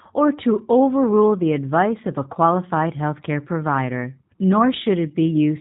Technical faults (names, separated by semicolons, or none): G.729 codec